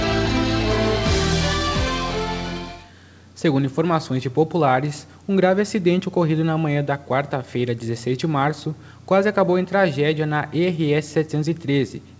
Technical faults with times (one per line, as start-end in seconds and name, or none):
none